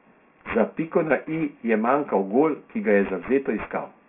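Aliasing runs through the whole speech clip: content above 3 kHz folds back as gritty, metallic tones only about 20 dB below the voice, which fits an unfiltered drop to a 6 kHz rate.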